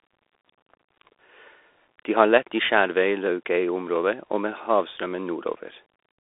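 Bluetooth CVSD headset codec runs throughout this speech clip. Nothing above about 3.8 kHz survives, the band sits near 200 Hz to 3.6 kHz, and the single-bit step tracking leaves plainly audible granular hiss and scratchy sibilants, consistent with a 64 kbps headset link, over room noise about 45 dB down.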